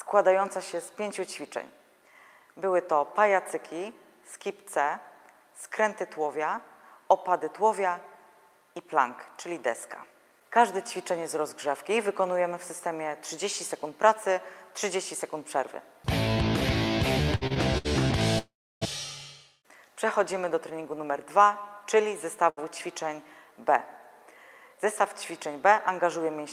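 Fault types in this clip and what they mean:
repeated stalls (stutter): Between 17.35 and 17.87 s the stream runs dry four times in quick succession. The receiver fills each gap by extending the last sound, about 171 ms in total, roughly a third of that half second, with the longest gap 66 ms. Nothing is lost, but the sound drags and jerks. On a spectrogram the harmonics smear into short flat stretches. The waveform shows repeated, near-identical cycles broken up at each gap.
call audio freeze: From 18.39 to 18.83 s the sound halts for about 429 ms, then resumes where it stopped. The likely cause is packets held up in transit, emptying the jitter buffer. The receiver briefly carries the last sound on as a fading buzz or hiss, and then about 310 ms of near-silence follows. On a spectrogram a smeared band fades into an almost blank column. The waveform tapers to a flat line before the sound resumes.
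short stall from a late packet: At 22.49 to 22.59 s a single packet arrives late, and the receiver stretches the preceding sound by about 77 ms to cover the wait. The sound then continues from the same point, with nothing missing, but one moment is held slightly too long, with a slight buzz or dip. A spectrogram shows a brief frozen, horizontally smeared patch. The waveform shows a short run of repeated periods there.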